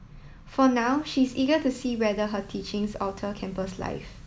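The speech has been requantised to a low bit depth with dither, carrying only 9 bits from 0.81 s to the end. Random dither is added before each sample is rounded to that coarse grid, so the rounding error loses any link to the signal and becomes steady white noise. From 0.81 s a constant, even hiss sits beneath the speech, roughly 35 dB down, with no grainy or harsh distortion riding on the speech itself.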